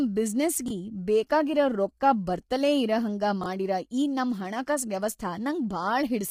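Throughout this speech clip the voice sounds rough and grainy, with noise filling the gaps between harmonics and a top band that sounds lowered or synthetic. That heavy damage points to likely low-delay AAC compression, AAC-ELD as used in video calls, at around 24 kbps. At 0.66 to 0.70 s and again at 3.41 to 3.46 s there are brief jumbled moments: chunks out of order, where a 21.33 ms chunk arrived one chunk late and played after its successor. Nothing is lost, but the sequence is wrong and there are hard joins.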